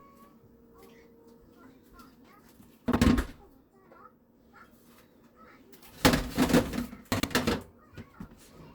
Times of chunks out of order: 2.88-2.96, 7.12-7.24

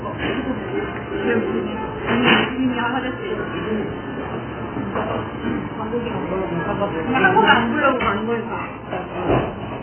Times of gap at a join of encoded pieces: none

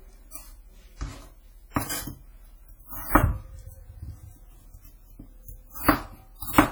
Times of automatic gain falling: none

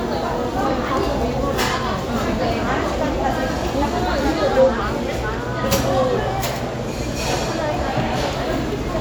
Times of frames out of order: none

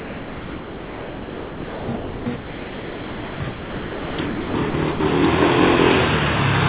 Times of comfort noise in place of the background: none

